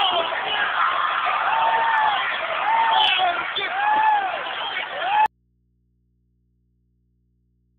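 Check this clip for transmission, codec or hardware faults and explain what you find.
One fault is present: an audio dropout to a faint residue. At 5.26 s the sound cuts out abruptly and never returns, so the gap runs to the end of the clip. The likely cause is a break in the signal feed while the path after it stayed live. What remains is mains hum, roughly 45 dB below the previous level. The cut is sudden, not a fade. The hum shows an open input still connected downstream.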